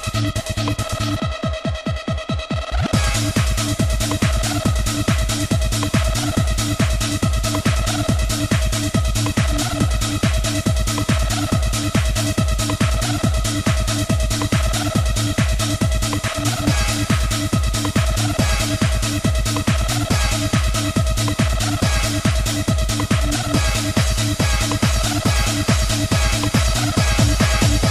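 No technical faults can be heard anywhere in this audio.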